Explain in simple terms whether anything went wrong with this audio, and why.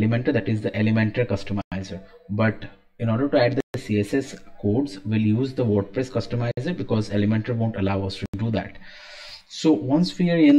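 The sound drops out to silence four times: at 1.61 s for about 0.10 s, at 3.60 s for about 0.14 s, at 6.51 s for about 0.06 s, and at 8.26 s for about 0.08 s. These gaps are most likely a Bluetooth stall. Radio interference delayed the wireless data, the headphones used up the small stock of audio they keep in reserve, and playback paused until the missing data arrived.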